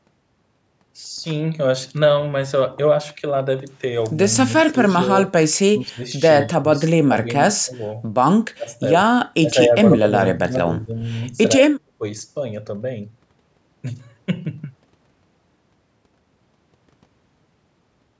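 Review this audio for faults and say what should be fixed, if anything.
Speech suppressed in double talk, likely from an echo canceller unable to separate near speech from far-end echo, ducks this speech by about 15 to 35 dB at 4.47–4.89, 5.77–6.03, 6.42–6.71, 7.05–7.28, 7.61–7.77, 8.28–9.08, 9.4–10.96 and 11.36–12.03 s. Tuning the echo canceller's double-talk detection and adaptation so near-end speech is kept while the far end talks would prevent this.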